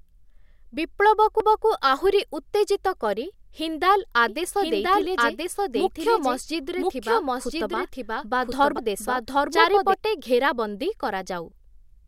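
At 1.40 s the laser jumped to another turn of the disc's spiral, a CD skip: the player mutes for a few milliseconds, heard as a tick, and the speech resumes from a different point, landing just before "ଆହୁରି ଉତ୍ତେଜିତ କରି".

From 4.28 s to 9.94 s a doubled audio track runs, the speech likely captured a second time through a slower path. A full-band copy trails by about one second at roughly equal level, with no room colour, switching on and off abruptly.

At 8.78 s a second CD skip repeats the same tick and a jump to another part of the disc.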